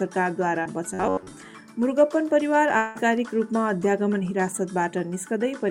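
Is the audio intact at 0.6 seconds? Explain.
No. Around 0.63 to 0.67 s there is short concealed packet loss: about 20 ms never arrived, so the receiver extended the preceding sound, leaving a brief smear or wobble.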